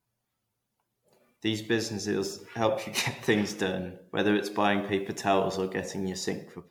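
Right from the start the whole clip has that swirly, hollowed-out quality of generation loss. The speech smears, consonant attacks go soft, and there's a watery shimmer that seems worse than any single MP3 encode would give. It sounds like it was likely decoded and re-encoded around seven times at a modest rate near 97 to 98 kbit/s. Each pass landed on a different frame grid, so the quantisation noise and spectral gaps piled up. Nothing comes through above about 19.9 kHz.

From 4.73 s to 6.23 s a second problem joins in: low bit depth without dither. The grit fits roughly a 10-bit signal that was likely just rounded, with no dither to decorrelate the error. The distortion tracks the speech instead of sitting as a steady hiss. It sits roughly 45 dB under the signal, so the quieter tails turn grainy.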